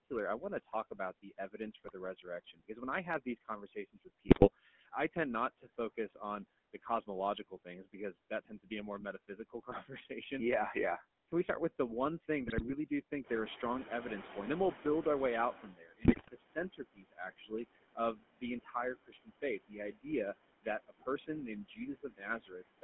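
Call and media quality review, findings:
Noise suppressor artifacts, throughout: background pushed down by about 21 dB, pumping between phrases. Frame-by-frame band attenuation of whatever it judges steady noise.

GSM full-rate codec, throughout: buzzy, gravelly roughness, band limited to 200 Hz to 3.4 kHz, which fits 13 kbps full rate. Pulse-excited vocal-tract model keeping sparse excitation.

GSM bit errors at 1.84–1.95 s, 4.26–4.50 s, 12.46–12.75 s and 16.03–16.29 s: squawks, pops and gargling. Corrupted filter, pitch and gain parameters reaching the speech decoder over a weak radio link.

Speech cut by the noise suppressor at 0.1–6.2 s (deepest about 20 dB, under a second in total), 6.74–8.71 s (about 18 dB, brief), 9.28–10.1 s (about 14 dB, brief) and 20.62–22.83 s (about 22 dB, roughly a second): soft consonants and word endings swallowed. Suppressor misclassifying low-level speech as noise.

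Noise suppressor catching up, 13.23–15.75 s: room noise jumps by about 13 dB near 13 s and passes through with less reduction at first, then sinks to about 18 dB of cut over roughly 2.5 s. Noise estimate lagging the sudden rise.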